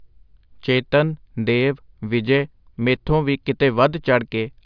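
Nothing stood out on listening to this speech recording.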